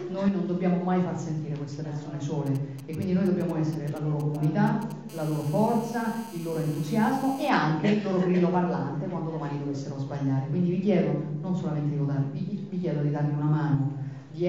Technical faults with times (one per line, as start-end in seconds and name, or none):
2.46-4.92 GSM signalling bursts
5.09-7.49 GSM phone buzz